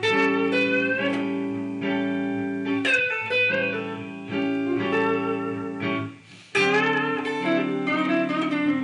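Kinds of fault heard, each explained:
No technical faults are audible anywhere in the recording.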